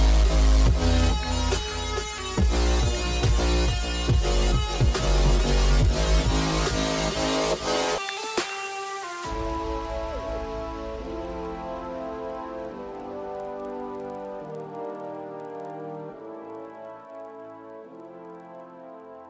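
A steady tick pattern runs through the whole clip at 20 per second, the signature of a resampler restarted on every block. Each 50 ms block was converted separately, so its edges were computed without their true neighbouring samples, leaving a small discontinuity at every boundary. The conversion fits a change from 44.1 kHz down to 16 kHz. Unlike mains hum or a constant buzz, these ticks follow the signal and drop away where the audio falls silent.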